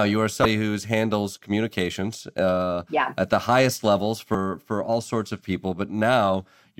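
A brief glitch cuts into the speech at 0.42 s, lasting about 30 ms, and a second glitch follows at 4.31 s for about 30 ms. Both come from damaged data in a compressed stream: a stretch of the encoded bytes was corrupted, so the decoder misread the affected frames, lost its place and had to resynchronise on the next valid frame header, producing these short garbled bursts.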